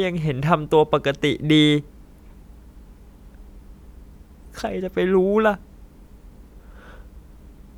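No audible technical faults.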